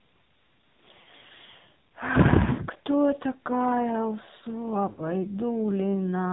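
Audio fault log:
throughout: AMR narrowband mobile codec. Nothing above 4 kHz survives, and the voice has a heavy buzzy, synthetic quality, which fits a low AMR-NB mode around 5.9 kbps. Unlike a simple low-pass filter, the vocal-tract model leaves the voice itself sounding buzzy and synthetic.
1.02–1.05, 2.52–2.62 and 4.90–5.02: lost AMR speech frames. Gaps of about 40, 60 and 80 ms, fitting two, three and four frames. The decoder stretches the last sound and lets it fade rather than cutting to digital silence, then resumes briefly rough. The longer gaps fade further.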